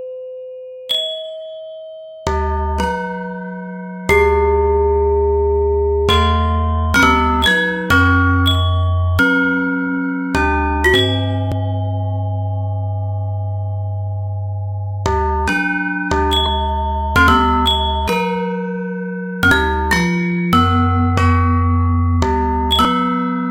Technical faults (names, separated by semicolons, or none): dropped buffer (overrun)